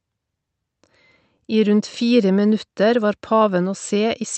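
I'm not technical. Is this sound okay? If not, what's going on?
No. Throughout the clip there is clock drift between sender and receiver: the sending device's clock runs about 3 percent slow, so sound arrives slightly late, and the receiving side keeps running short of audio and has to fill in small gaps to keep going.

From 0.10 to 3.95 s come the repeated timing corrections this forces. The receiver stretches the speech by repeating tiny pieces, playing it at about 98 percent speed and adding roughly a tenth of a second overall.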